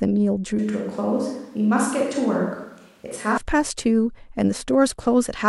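At 0.59 s the speech suddenly turns roomy and hollow, losing low end and dropping roughly 5 dB, with background room noise sitting around 40 dB below the speech. That's the classic sound of a switch to a distant microphone: the close mic's feed most likely dropped out or wasn't used, so we're hearing a mic further off picking up more room. It snaps back just as abruptly at 3.37 s.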